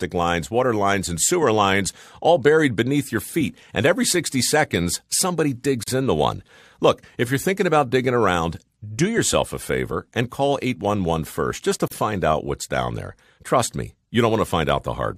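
Speech drops out at 5.83 s, after "seconds somebody", for 43 ms, and at 11.88 s, before "find out what's down", for 37 ms. Both are gaps at joins of encoded pieces, where untrimmed encoder delay and padding leave short silences. Each shows as a thin blank vertical strip on the spectrogram and a flat stretch in the waveform, with smeared edges.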